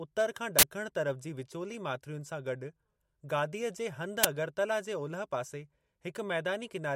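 From 0.59 to 0.63 s the speech is broken by a burst of digital noise lasting about 43 ms, and at 4.24 s a much shorter crack of about 11 ms cuts in. Both are an uninitialised buffer: audio blocks were sent to playback before any samples had been written into them, so whatever leftover memory they held was played as sound. The lengths fit a 2048-sample buffer for the first event and a 512-sample buffer for the second.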